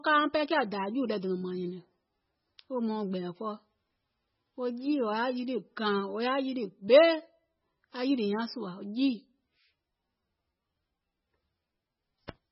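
Throughout, the speech carries heavy MP3 compression damage, likely from a very low bitrate near 16 kbps. A spectrogram shows a hard ceiling at 5.6 kHz and patchy, flickering energy below it. The sound is watery and swirly, with smeared consonant onsets.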